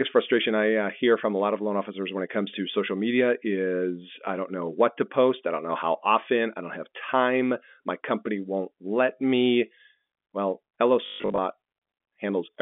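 A speech recording carried over a G.711 telephone-coded line, band-limited to roughly 200 Hz to 3.5 kHz, breaks into a brief robotic stutter between 11.06 and 11.38 s near the end. That is packet loss with the last packet repeated: about 240 ms of audio went missing in bursts across that 320 ms stretch, the longest run lasting 140 ms, and the receiver replayed the previous chunk to fill each hole. The longest run buzzes at 50 Hz, which fits 20 ms packets. Unlike silence-filled dropouts, the gaps aren't dead air.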